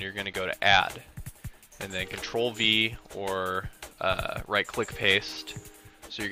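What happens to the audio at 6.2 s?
Nothing goes wrong at 6.2 s; the audio plays through that moment intact, with no dropout, click or other fault.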